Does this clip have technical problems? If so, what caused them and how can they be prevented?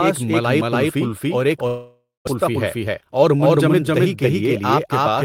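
Yes. Throughout the clip, every sound is followed about 300 ms later by a second, equally loud full-band copy with no room colour. This doubled audio track likely comes from the same signal being captured twice, once through a slower path. Routing each source through a single capture path prevents it.

From 1.67 to 2.29 s, the sound is drawn out into a fading buzz, then about 0.19 s of near-silence, before the audio resumes with roughly 400 ms missing. A long network dropout likely caused this: no packets arrived, so the receiver concealed the gap. A more stable connection or stronger redundancy prevents it.

From 2.37 to 4.77 s, the speech runs hurried at about 107% speed while keeping its pitch. This is a jitter buffer speed-up. After a backlog built up, the receiver trimmed short pitch-period slices, around 0.2 s in total, to cut the delay. Steadier packet delivery prevents the backlog.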